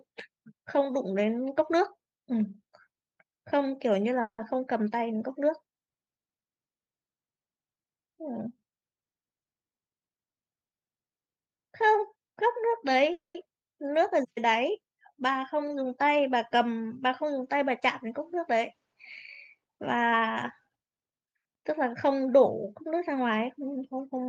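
Call audio freeze at 4.21 to 4.40 s and 13.12 to 13.36 s in this speech: the last sound trails off into a fading buzz and then silence for about 80 and 150 ms. The speech resumes where it stopped, likely because delayed packets left the jitter buffer empty. Jitter buffer speed-up at 15.55 to 16.11 s, running at 107%, and at 19.55 to 21.34 s, running at 110%: the receiver trimmed tiny pitch-period slices to cut the backlog, about 50 ms and 200 ms in total. The speech sounds hurried, but its pitch does not change.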